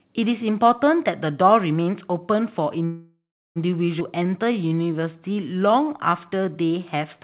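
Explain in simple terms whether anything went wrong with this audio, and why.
A call audio freeze hit from 2.85 to 3.58 s, likely because packets were held up. The sound hangs as a fading buzz, then silence, before resuming intact.

A skip ahead follows at about 4.00 s: roughly a third of a second of speech was dropped, so the audio jumps forward with almost no gap.

From 4.19 to 7.18 s, a jitter buffer slow-down rebuilds its reserve by repeating tiny slices. Speech plays at about 90% speed, drawn out but at normal pitch.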